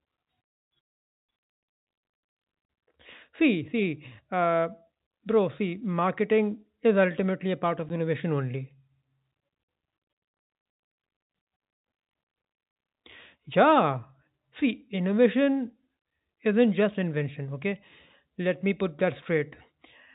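A speech recording on a G.711 telephone path, with nothing above 4 kHz. At 7.89 s, between "ultimately a part of" and "innovation only", packet loss filled with silence leaves a hard-edged 10 ms hole, consistent with one lost packet.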